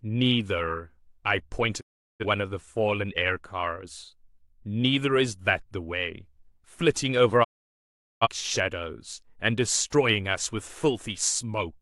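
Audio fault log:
1.79–2.25 s and 7.43–8.28 s: digital broadcast dropout. The speech fades out over 20 ms and then goes silent for 384 ms, then 768 ms, while the receiver mutes on bad frames.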